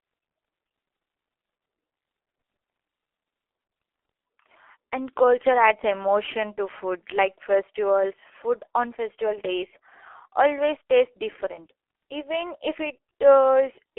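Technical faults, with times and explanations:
Throughout, G.723.1 codec: the speech is confined to a telephone band of about 300 Hz to 3.4 kHz, so it sounds muffled with no high-frequency air. Heavy coding damage makes the voice hoarse and smears consonants. The codec works in 30 ms frames and refreshes its model of the vocal tract only slowly, so fast articulation gets averaged away. The thin, rough texture fits a bitrate of roughly 6 kbit/s.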